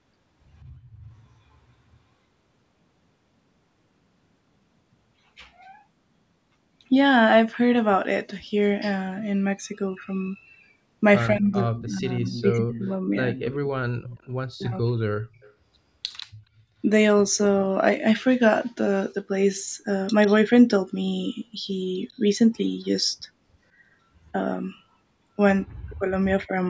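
Speech from a call, with two kinds of fault. An echo leak returns a delayed copy of the speech, about 145 ms late, at 1.23–1.29 s, 11.75–14.28 s, 15.33–16.23 s and 20.26–20.35 s. It is faint at first, then strongest around 12–14 s. The likely cause is a far-end echo canceller letting loudspeaker sound through. Speech suppressed in double talk appears at 11.3–13.36 s, 14.54–15.11 s and 25.7–26.56 s. The speech dips, by roughly 40 dB at worst. Both sides were likely talking at once, so the canceller turned down both its own talker and the echo. The call microphone processing caps the sound at 8 kHz.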